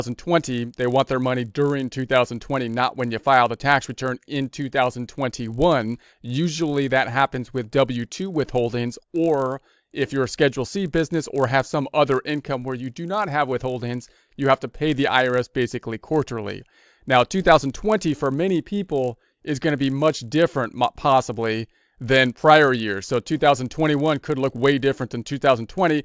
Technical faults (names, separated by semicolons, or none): resampler restarted on every block